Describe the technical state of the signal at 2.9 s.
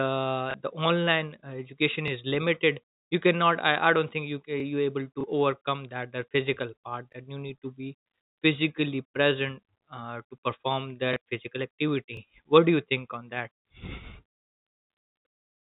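At 2.9 s the speech comes through intact, carried on the normal G.711 telephone band with nothing cut, clicked or distorted at that moment.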